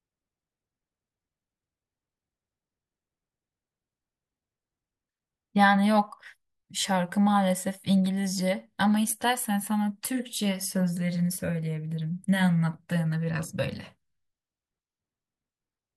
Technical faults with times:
none

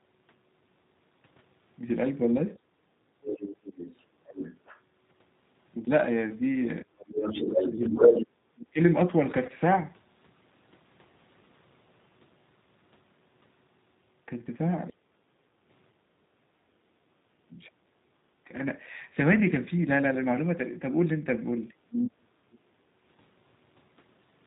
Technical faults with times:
0.00-24.46 G.729 codec
6.83-8.79 speech suppressed in double talk
7.21-8.23 other side's voice leaking through
9.46-9.50 VoIP packet loss concealed by the speech codec
15.31-16.30 background gated by the echo canceller
16.58-18.50 speech suppressed in double talk
21.81-22.77 speech suppressed in double talk

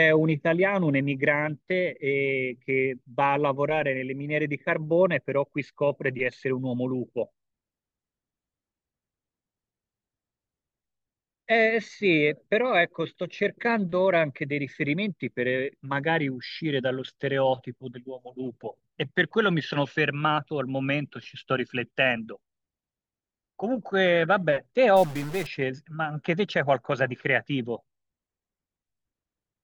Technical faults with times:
24.96-25.46 stuck bit

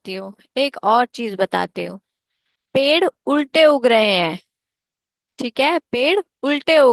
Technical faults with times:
none

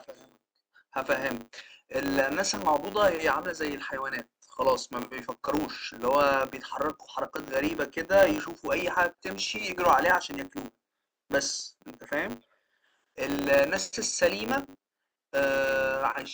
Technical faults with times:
0.00-16.33 filter restarted on every block

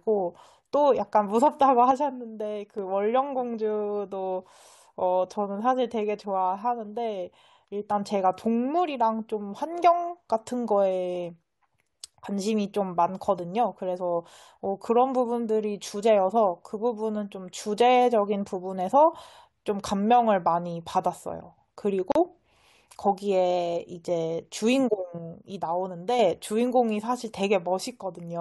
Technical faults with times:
1.91-2.78 one channel drops out
22.12-22.15 gap at a join of encoded pieces
25.18-26.19 one channel drops out

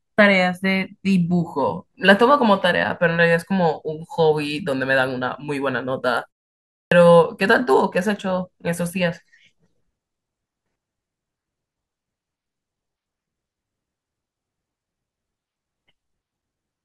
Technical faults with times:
6.79-6.91 clipped start after a pause

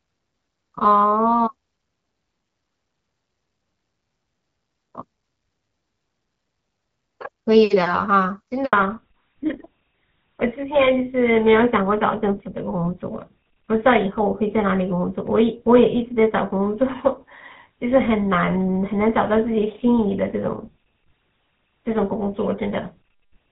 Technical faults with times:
8.65-8.73 handover gap
8.73-23.51 fallback to narrowband

